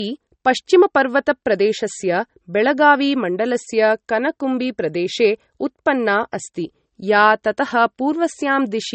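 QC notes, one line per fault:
Throughout: low-bitrate audio saved at a high bitrate. The speech has a hard ceiling near 8.4 kHz with swirly, smeared detail. A spectrogram shows a flat band-limit edge and an empty top. Likely an MP3 around 32 kbit/s re-encoded near 320 kbit/s, which cannot restore what was lost.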